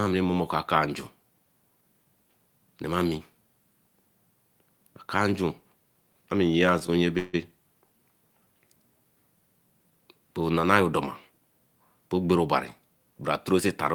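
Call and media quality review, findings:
Call audio freeze, 7.18–7.35 s, speech. Packet delivery stalled, jitter buffer likely ran dry. Receiver concealment extended the last sound as a fading buzz or hiss for about 155 ms. No audio lost; playback resumed where it stopped, so stream now lags by about 155 ms.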